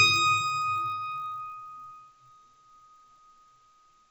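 Throughout, a resampler restarted on every block leaves an error at each 20 ms edge of the 16 kHz to 48 kHz conversion: a 50 Hz buzz that, unlike mains hum, vanishes whenever the sound stops.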